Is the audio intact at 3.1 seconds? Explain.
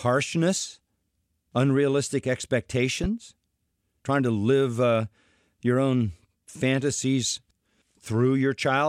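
No. A loud pop hits the speech from 3.04 to 3.07 s, ending just before 3.1 s. It is a single sharp thump sitting a few decibels above the speech, which continues underneath. The likely cause is a sudden voltage step from a switch, plug, static discharge or driver glitch, shaped by the downstream circuitry. On a waveform it shows as an abrupt spike standing a few decibels above the surrounding signal. On a spectrogram it appears as a thin vertical stripe spanning the full frequency range.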